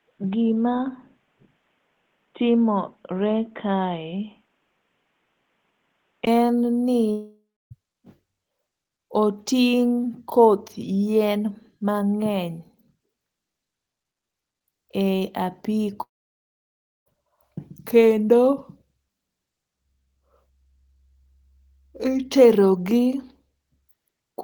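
From the start to 6.27 s the speech is band-limited, with nothing above 3.8 kHz, so it sounds dull and boxy, with a faint noise floor far below the speech. At 6.27 s there is a 20 ms gap, and then full bandwidth returns just before "en ni" with no noticeable jump in level. This points to an input switched to a poorer device, likely a headset call profile or a secondary microphone, whose narrower band and different noise carried the opening section.

A long network dropout follows at 7.11 to 7.73 s, right after "en ni". About 600 ms of audio never arrives. The receiver stretches the last sound into a buzzy, fading continuation, which gives way to roughly 280 ms of silence before the speech resumes further on. A second, longer dropout runs from 16.03 to 17.08 s, with about 1.04 s missing and nearly all of it heard as silence after a brief concealed tail. Both gaps were likely caused by packet loss on the network path.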